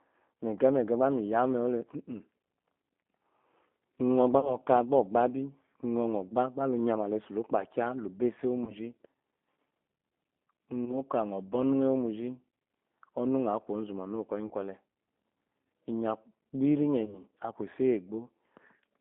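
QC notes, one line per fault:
Throughout: G.729 codec at 8 kbit/s, speech confined to about 200 Hz to 3.5 kHz, plainly rough and synthetic; spectrogram shows nothing above 3.5 kHz, smeared pulse-like texture.
4.40–4.57, 8.64–8.75, 10.85–10.98, 14.47–14.52, 17.05–17.21 s: VoIP packet loss concealed by the speech codec, 20 to 50 ms lost each time; decoder extrapolates, giving a buzzy tone or coloured noise that fades, visible as flat repeated harmonics and dipping waveform envelope.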